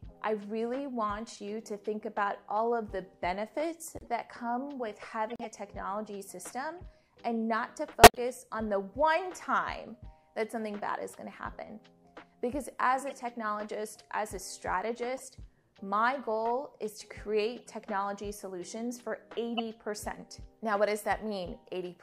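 Corrupt frames were decoded and played anyway, putting energy at wrong frequencies for a few frames each. The result is brief chirps and noise bursts at 3.99–4.07, 5.30–5.45, 6.79, 8.03–8.18 (loudest, near full scale), 13.07–13.13, 15.17–15.21, 17.59–17.68 and 19.54–19.60 s.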